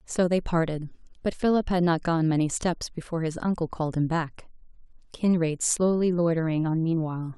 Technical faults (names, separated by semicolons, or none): channel delay (comb filtering)